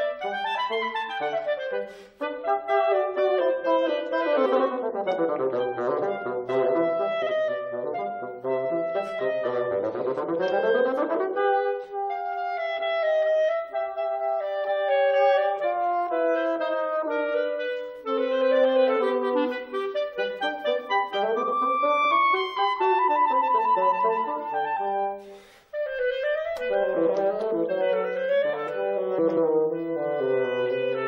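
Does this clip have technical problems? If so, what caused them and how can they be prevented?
Yes. Frames out of order cause brief garbled flutters at 4.45–4.61 s, 7.22–7.32 s, 21.43–21.53 s and 29.18–29.37 s. In each, two adjacent blocks of about 70, 46, 46 and 93 ms play swapped. Unlike dropouts, nothing goes missing and the timing stays intact. Prevent it by buffering and reordering frames by sequence number or timestamp before decoding.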